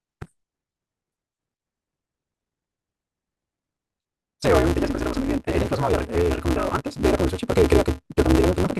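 From start to end, a block size mismatch (truncated) discards each block's tail, giving a 188 Hz buzz and speech running 1.88 times fast at near-normal pitch, consistent with 256-sample reads.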